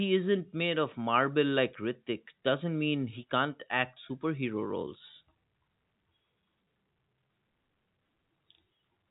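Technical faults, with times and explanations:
No technical faults detected.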